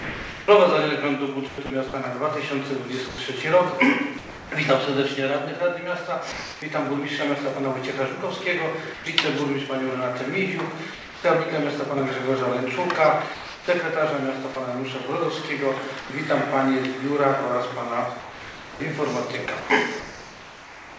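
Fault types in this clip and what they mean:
Sound chopped by the voice detector: The sender's voice activity detection likely toggled on and off repeatedly, swapping short pieces of sound for comfort noise. From 0 to 4.52 s, 13.34 to 14.56 s and 18.2 s to the end, the sound stutters.
Sound dropped by the voice detector: Quiet passages were likely classed as background, so transmission stopped and steady comfort noise filled the gap until the detector reopened. The sound drops out at 6.32 s for 300 ms, 8.94 s for 120 ms, 10.94 s for 300 ms and 16.0 s for 100 ms.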